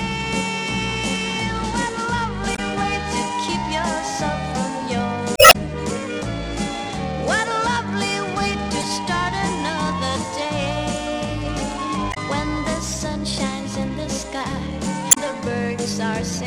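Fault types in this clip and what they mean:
Damaged data in a compressed stream, at 2.52–2.59 s, 5.34–5.56 s, 8.80–8.84 s, 12.10–12.17 s and 15.08–15.18 s: corrupted bytes in the encoded file make the decoder misread those frames and lose sync until it locks onto the next valid frame header. Each spot is a brief garbled chirp or blip cutting through the sound, the longest lasting about 0.2 s around 5.4 s.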